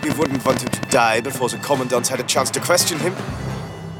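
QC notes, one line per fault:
0.03–0.95 s, train of clicks: about fifteen sharp, similar ticks at an uneven pace near 16.5 per second, standing roughly 20 dB above the sound and audible in the gaps too. The repeated pulses most likely come from interference or a faulty connection or power supply.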